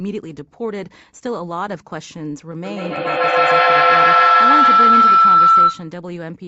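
At 2.65 s a feedback howl begins and runs until 5.95 s. Two devices in the same room are on the call. Sound leaves one loudspeaker, reaches the other microphone, and returns louder each trip. The repeats narrow to a tone near 1.5 kHz. The loop's delay is roughly 150 ms. At its peak it stands about 12 dB above the speech. The howl stops at 5.95 s, when the loop is broken.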